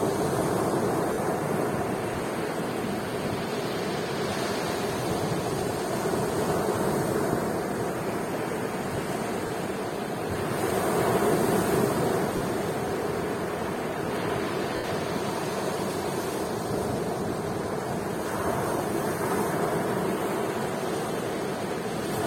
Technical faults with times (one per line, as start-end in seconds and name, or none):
1.13-1.18 lost LE Audio frames
9.47-9.50 lost LE Audio frames
12.37-12.41 lost LE Audio frames
14.76-14.84 lost LE Audio frames